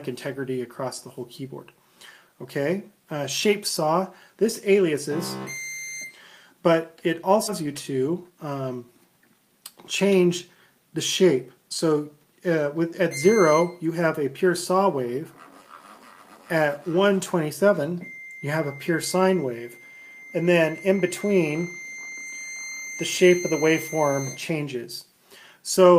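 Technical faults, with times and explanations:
7.47 to 7.49 s, skip ahead: roughly 0.7 s of audio is simply gone, and playback jumps straight to later material with no fill. A spectrogram shows an abrupt vertical seam where unrelated spectral content butts together, and the waveform shows a sudden envelope discontinuity.
8.07 to 8.32 s, jitter buffer speed-up: the receiver trimmed around 40 ms in short pitch-period pieces to shrink an oversized buffer, so the sound runs at about 112% speed at unchanged pitch and feels briefly hurried. On the waveform, periodic cycles keep their length but some are missing. On the spectrogram, harmonics stay level while events compress in time.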